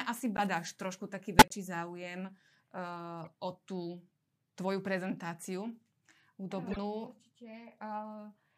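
Short chirps and blips break through the speech at 0.37 to 0.39 s, 1.39 to 1.52 s (loudest), 3.25 to 3.27 s (faint) and 6.71 to 6.77 s. Each is a corrupt frame decoded: damaged compressed data was played anyway, spraying energy across wrong frequencies for a few frames.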